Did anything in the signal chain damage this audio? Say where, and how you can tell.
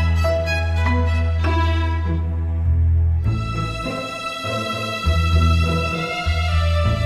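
Yes. From 4.47 s to the end, a doubled audio track appears: a full-band copy trails the original by about 300 ms at roughly 5 dB lower, with no decay or room colour, and it switches on abruptly. The stage is likely driver or buffer routing, where a slower second capture path gets summed back in. On a spectrogram every event gains a fainter, identical twin shifted right by a fixed gap. The waveform shows the offset repeat starting with a hard edge.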